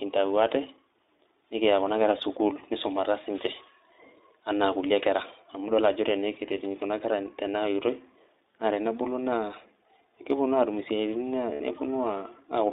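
Speech carried over an iLBC codec throughout, with plainly audible coding damage. The audio is confined to a narrow telephone band of roughly 200 Hz to 3.7 kHz, so everything above that is missing. Because iLBC codes each 20 ms frame's excitation independently, the voice is intelligible but slightly rough and synthetic. The density of detail fits the 15.2 kbps mode. Lost iLBC frames occur at 2.54 to 2.60 s, 6.80 to 6.84 s and 11.54 to 11.61 s. The first two gaps are about 20 ms, consistent with a single dropped frame. The last is about 60 ms, which points to three consecutive frames. In each gap the decoder conceals the loss by repeating the last pitch cycle mixed with noise, giving a brief held, buzzy vowel-like sound. The longest gap fades during concealment. Since frames do not depend on their predecessors, the speech recovers almost immediately after each gap.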